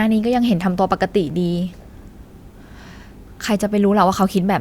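No technical faults can be heard anywhere in the speech.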